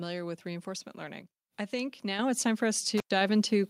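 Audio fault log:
2.19 s, microphone volume stepped up: The call software judged the microphone too quiet and raised the device's input volume in a single jump of 7 dB. From that instant the voice and the background noise both get louder together, a sudden step in level.
2.98 to 3.11 s, intermittent contact: A loose cable or plug briefly opened the connection for about 105 ms. The speech drops out abruptly, with crackle as the contact breaks and remakes, and faint hiss remains while the line is open.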